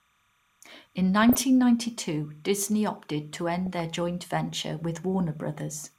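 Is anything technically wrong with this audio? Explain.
Yes, there are two faults.

Timecode bleed runs through the whole clip: a faint, steady chirping warble sits behind the speech, roughly 45 dB below it, flipping between tones near 1 and 2 kHz. Linear timecode has leaked in from a neighbouring track or cable. Its square-wave pattern repeats at a rate that fits 29.97-frame code.

DAB burbling appears from 1.23 to 1.42 s and again from 3.66 to 3.80 s, between "opted to" and "joint venture". Weak reception let bit errors through into the MP2 data, so wrong samples put short blips of noise into single sub-bands.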